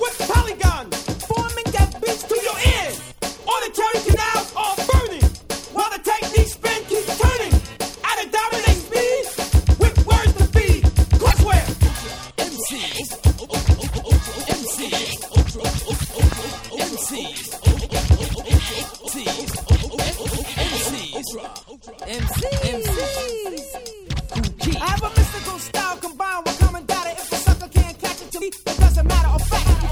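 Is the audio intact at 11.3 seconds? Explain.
No. From 11.29 to 11.33 s, roughly 40 ms, there is damaged data in a compressed stream. Part of the encoded data at that point is corrupt, so the decoder misreads the affected frames and loses sync until it finds a valid frame header. The result is a short garbled blip or squawk.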